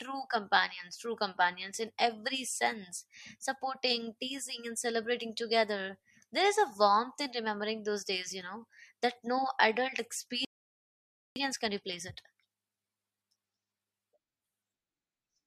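The speech drops to silence mid-flow at 10.45 s and stays silent for about 0.91 s until 11.36 s: a playback stall, likely the player running short of buffered data or having its output thread blocked. From 11.36 to 14.36 s the speech sounds hurried at unchanged pitch, running about 1.15 times normal speed. This is time-compressed catch-up, where small slices are cut and cross-faded to work off the backlog the stall built up.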